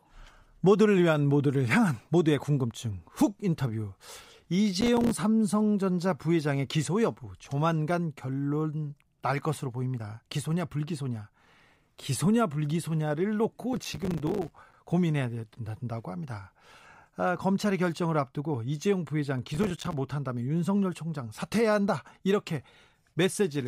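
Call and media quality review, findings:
Processor overload crackle at 4.81–5.11 s, 13.73–14.74 s and 19.54–19.93 s: gritty tearing over the speech, likely from an overloaded audio processing path missing about 15, 40 and 20 buffer deadlines again and again. Each miss drops to silence. The gaps are only a few milliseconds long, which fits a buffer of about 5 ms. On the waveform they appear as dense hard-edged gaps to silence. On the spectrogram they appear as clustered broadband vertical stripes.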